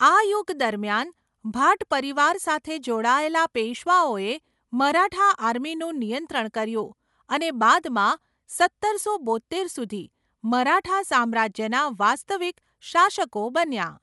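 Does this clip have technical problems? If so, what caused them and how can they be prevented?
Yes. Throughout the speech, the sound is dull and band-limited, with nothing above about 11.5 kHz, and a rough, fluttering noise clings around tonal parts of the voice. This plainly audible damage is likely Dolby Digital compression at a low rate, around 64 kbps: the encoder narrows the bandwidth and leaves many frequency lines without mantissa bits, so the decoder fills them with dither noise. Encoding at a higher bitrate, or with a less constrained codec, would prevent it.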